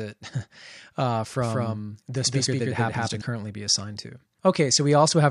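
From 1.42 to 3.22 s a doubled audio track appears: an equally loud copy trails by about a fifth of a second, likely a second capture path. Unlike an echo, it has no decay and starts and stops abruptly.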